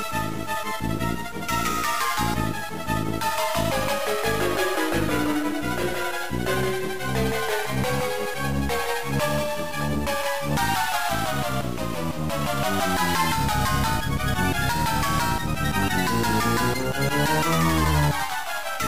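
Periodic USB or driver dropouts: something blocks the audio path every 2.0 s from 1.84 to 17.85 s, muting about 2 ms each time, giving around ten regular ticks.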